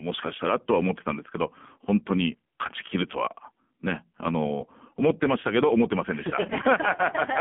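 AMR narrowband mobile codec damage runs through the whole recording. The speech is confined to a phone line band of about 150 Hz to 3.4 kHz, with nothing above 3.7 kHz. Heavy buzzy, synthetic coloring from the vocal-tract model fits a low rate near 5.9 kbps.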